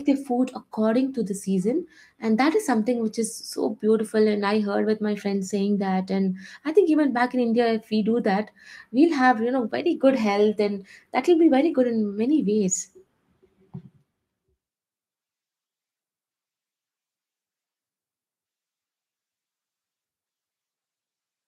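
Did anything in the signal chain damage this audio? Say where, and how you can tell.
No, nothing in this speech recording stood out on listening as damage from any stage of the signal chain.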